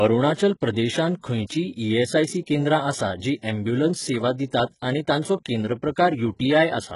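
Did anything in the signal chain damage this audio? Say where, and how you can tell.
Yes, at the codec stage. The speech has gritty, lispy treble and nothing above 11.1 kHz. The spectrogram shows copied upper bands whose harmonics misalign, likely from HE-AAC at a very low bitrate.

Pre-echo at 3.42 s and 4.80–4.82 s. Quantisation noise spread across each transform block leaks 17 and 26 ms ahead of the attacks, visible as short hiss before each transient on the waveform.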